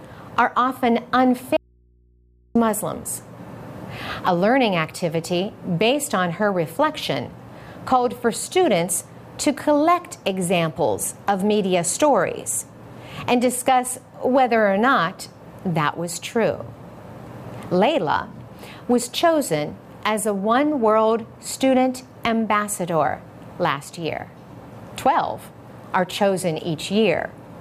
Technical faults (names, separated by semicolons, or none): audio dropout to a faint residue